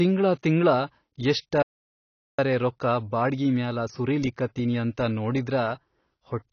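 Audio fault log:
throughout, AAC compression: The speech sounds dull and smeared, with nothing above 6.6 kHz and a watery, fizzy edge on sibilants and held vowels. This is likely a low-bitrate AAC-LC encode, roughly what 24 kbps would give. At that rate the encoder can't afford the upper spectrum, so it cuts the band short and quantises what remains coarsely. Some bands are left empty or filled with noise, which causes the warble.
1.62–2.39 s, playback stall: The speech stops dead mid-flow and there is silence for about 0.76 s. It then resumes on "ರೊಕ್ಕಾ ಬಾಡ್ಗಿ". The likely cause is that the player ran out of buffered data, or its audio thread was blocked, so it had nothing to send to the output. It went silent and waited until data arrived again.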